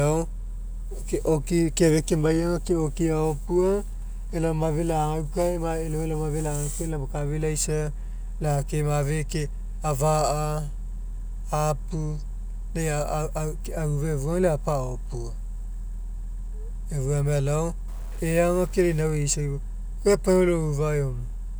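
From 17.88 to 19.01 s, the speech turns grainy and noisy. This is likely a stuck bit, knocking about half the samples off by a step of around -45 dBFS.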